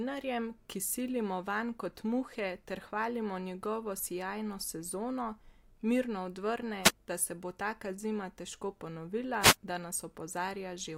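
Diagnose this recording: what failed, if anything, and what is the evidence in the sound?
Two brief bursts of static swish over the speech, at 6.83 to 6.91 s and again at 9.40 to 9.56 s. This is a wireless microphone noise hit in the analogue radio link: multipath reflections momentarily cancel the FM carrier, and receiver noise surges through.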